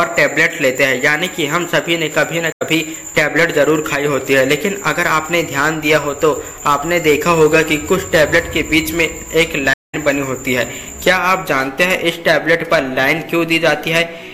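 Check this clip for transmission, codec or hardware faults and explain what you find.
Two stream reconnects interrupt the audio. At 2.52 to 2.62 s there is an 80 ms gap. At 9.74 to 9.95 s the gap lasts 195 ms. The connection dropped, and the player restarted its decoder mid-stream. Sound resumes slightly later, skipping roughly 70 ms and about a tenth of a second.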